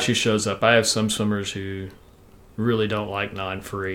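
No technical faults are audible.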